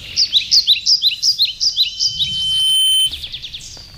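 A loudspeaker feedback squeal runs from 1.72 s to 3.12 s: a single tone at 3.1 kHz swells over roughly a second until it sits a few decibels above the rest of the audio, then stops. A microphone is picking up the loudspeaker it drives, and at 3.1 kHz the loop gain around that path exceeds unity, so the tone keeps reinforcing itself until the loop is broken.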